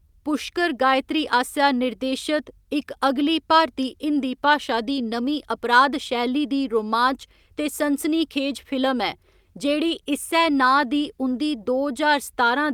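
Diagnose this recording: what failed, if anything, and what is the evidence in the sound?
Nothing in this speech recording points to a failure at any stage of the chain. No event in the sound marks a breakdown in wiring, conversion, processing, transmission, storage or playback.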